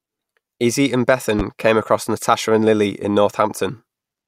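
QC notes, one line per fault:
1.39 to 1.43 s, loud pop: a single sharp pop stands out above the speech, peaking roughly 10 dB over it, while the speech carries on underneath. This is likely a brief voltage pulse, such as static or a switching transient, entering the signal chain.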